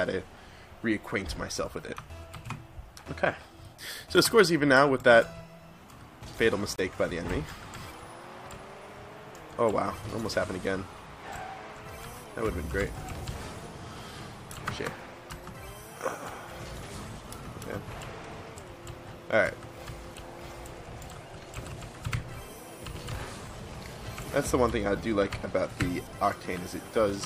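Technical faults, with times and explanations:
6.76 to 6.80 s, corrupt frame muted: bit errors damaged a short run of compressed frames, the decoder rejected them, and the player substituted silence for the missing data. The result is a hole of about 42 ms that opens abruptly rather than fading, a length that fits roughly three short codec frames dropped in a row. Because silence fills the gap instead of the frames simply being skipped, the audio after the hole stays in time.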